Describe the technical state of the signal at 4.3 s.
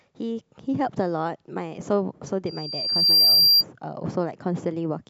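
At 4.3 s the speech signal is intact, with no audible technical fault at that moment.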